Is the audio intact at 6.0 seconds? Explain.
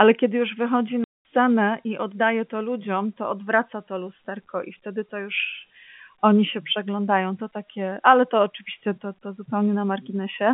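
Yes, the audio is intact at 6.0 seconds, with the speech passing cleanly through its telephone-band G.711 coding at that moment.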